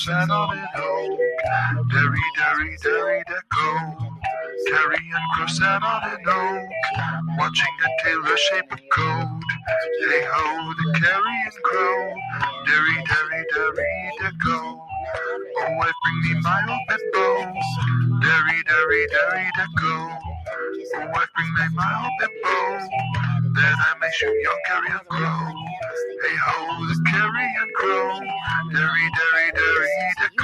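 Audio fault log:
Throughout: noise suppressor applied to music or sounds. A speech-oriented suppressor treats steady tones, ambience and decays as noise, so gain swings by around 5 dB. On a spectrogram, held bands and tails fade while onsets stay intact; the waveform envelope rises and sinks unevenly.
0.58–0.74 s, 3.93–4.25 s, 8.63–8.91 s, 14.72–14.91 s: sound cut by the noise suppressor. The suppressor misread these stretches as noise and pulled them down harder, by about 9, 13, 15 and 8 dB. Each shows as a darker gap on the spectrogram and a sudden envelope dip.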